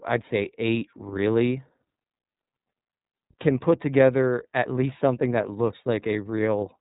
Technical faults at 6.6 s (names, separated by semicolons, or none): iLBC codec